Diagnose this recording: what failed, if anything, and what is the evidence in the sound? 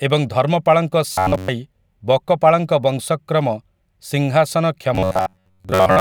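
Robotic sound from repeated short buffers shows up twice in the speech, from 1.12 to 1.48 s and from 4.95 s to the end. The voice collapses into a stiff, metallic buzz pinned at 93.8 Hz that only loosely tracks the speech. That's likely a driver or buffer stage starving for data and looping the last 10.7 ms or so of audio, so most of the real signal in those stretches is lost to repeats.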